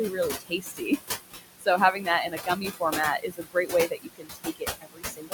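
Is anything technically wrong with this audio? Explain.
Yes. Throughout, the background sinks about 16 dB between phrases and swells back under them. These are noise suppressor artifacts from frame-by-frame band gating.

From 0.1 to 1.0 s, 1.31 to 2.08 s, 2.29 to 2.98 s and 3.19 to 5.33 s, soft sounds fade or vanish, dropping by about 14 to 22 dB. This is speech cut by the noise suppressor: it mistook quiet speech for the room noise, which sits only about 6 dB below the speech.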